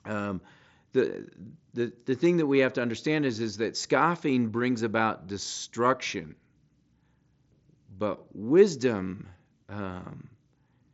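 No technical faults are audible.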